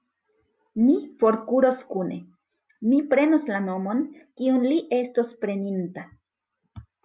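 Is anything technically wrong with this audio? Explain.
No, nothing technically wrong is audible here.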